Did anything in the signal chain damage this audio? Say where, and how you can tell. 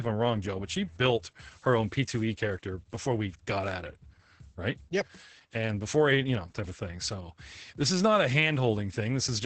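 Yes, at the codec stage, throughout the clip: Opus voice compression. The speech sounds muffled, hoarse and slightly robotic, with nothing above about 8.7 kHz. That fits SILK running wideband at a bitrate near 10 kbps, where the excitation is coded coarsely.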